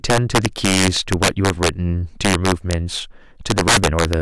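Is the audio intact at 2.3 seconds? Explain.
No, integer overflow runs through the whole speech clip, including 2.3 s: peaks driven about 11 dB over full scale wrap to the opposite sign, producing sharp cracks.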